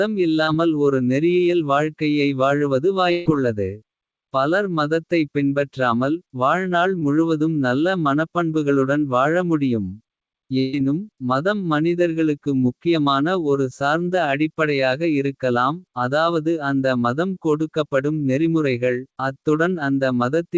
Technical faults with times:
0.44-0.49 short concealed packet loss
3.11-3.27 burst of packet loss
6.99-7.03 short concealed packet loss
10.59-10.75 burst of packet loss

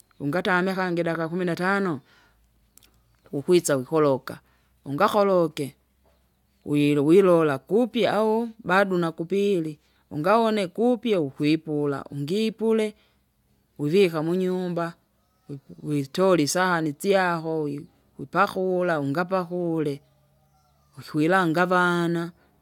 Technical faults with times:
none

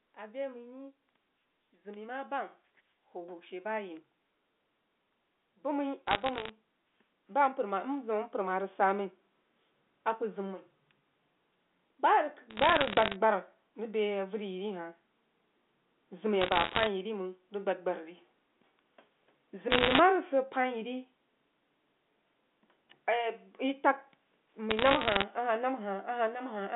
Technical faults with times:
0.16-4.10 automatic gain rising
5.62-9.06 automatic gain rising
6.07-6.49 bit errors on a digital phone line
12.50-13.16 bit errors on a digital phone line
16.41-16.87 bit errors on a digital phone line
19.70-20.00 bit errors on a digital phone line
24.71-25.23 bit errors on a digital phone line

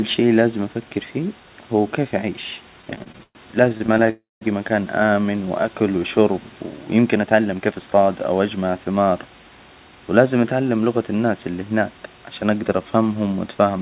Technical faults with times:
2.82-4.10 repeated stalls (stutter)
4.10-4.43 call audio freeze
6.99-8.57 jitter buffer speed-up

